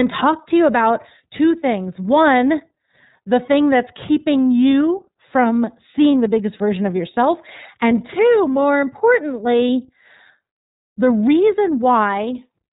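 From start to finish the speech has been through the iLBC codec, and the damage is plainly audible. Everything above 4 kHz is gone, so the voice sounds boxed-in and telephone-like. Each frame's excitation is coded on its own, which leaves a rough, slightly synthetic grain on the voicing. The character fits iLBC's 30 ms frame mode, which runs at about 13.3 kbps.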